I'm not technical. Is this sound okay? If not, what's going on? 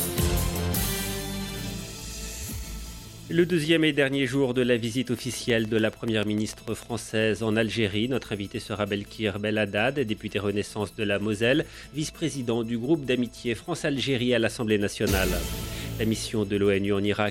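No. From 5.19 to 6.84 s there is a train of clicks: about ten sharp ticks, evenly spaced at roughly seven per second, standing out clearly above the sound and audible even in quiet moments. Their steady rhythm and matching shape set them apart from crackle, which is random and uneven, and from a single stray pop. The likely cause is electrical interference from nearby equipment or a faulty connection or power supply.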